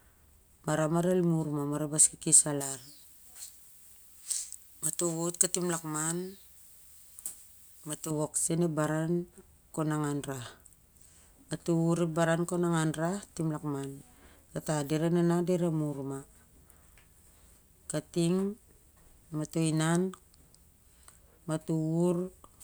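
From 2.61 s to 8.11 s the speech turns thin, bright and hissy, with sibilants spitting well forward of the rest of the sound. This is pre-emphasis left on: a treble boost applied for recording or transmission whose matching de-emphasis cut never happened, leaving the top end about 11 dB hotter at 10 kHz than at 1 kHz. The shape of the lift fits a J.17 emphasis curve.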